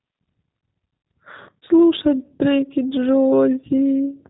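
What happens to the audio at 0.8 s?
At 0.8 s the speech carries G.729 codec damage, present across the whole clip: the 8 kbit/s model rebuilds the voice from a filter and a few pulses, so it sounds rough and synthetic, with an empty spectrogram above 4 kHz.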